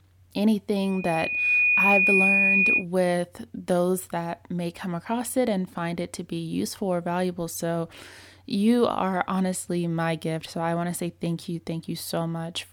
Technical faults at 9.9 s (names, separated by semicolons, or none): none